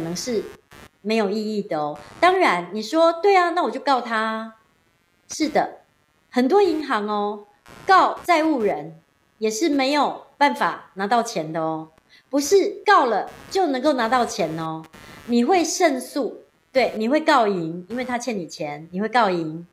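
Running under the speech for the whole clip there's computer activity noise: a buzzy, chirpy pulsing at somewhere around 150 a second, sitting roughly 30 dB below the voice. It tracks the machine's load, not the talking, because processor or graphics activity is shaking the shared ground.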